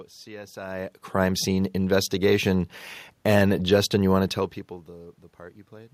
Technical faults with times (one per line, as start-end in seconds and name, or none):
none